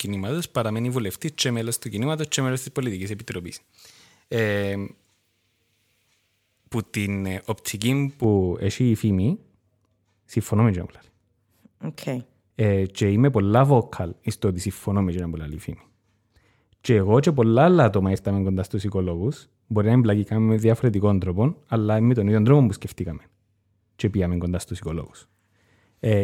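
From 0.0 to 8.2 s, pre-emphasis is left on. The treble boost applied for recording or transmission was never undone by the matching de-emphasis. The curve fits J.17, lifting 10 kHz about 11 dB above 1 kHz. The speech sounds thin, bright and sibilant.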